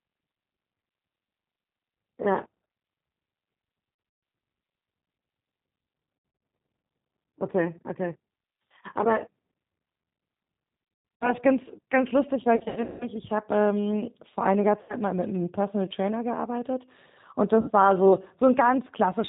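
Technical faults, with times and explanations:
Throughout: G.729 codec. The whole clip has gone through this 8 kbit/s VoIP codec, and the damage is easy to hear. Everything above 4 kHz is gone, so the speech sounds boxed-in and dull. The codec rebuilds each 10 ms frame from a vocal-tract filter, a pitch predictor and a handful of pulses instead of carrying the actual waveform, so the voice comes out a bit rough and synthetic.
3.95–4.23 s, 6.17–6.41 s, 11.16–11.34 s, 12.56–13.08 s, 14.81–14.95 s and 17.60–17.71 s: VoIP packet loss concealed by the speech codec. Each of these spots lost between 80 and 300 ms of audio. Most were scattered gaps, with the longest unbroken run at 160 ms, in the 12.56–13.08 s stretch, and the pattern fits 20 ms packets. During each gap the decoder stretches its last pitch and filter into a buzzy tone or coloured noise that fades. Because every frame builds on the previous one, the voice stays weak and smeared for a moment after the packets start arriving again.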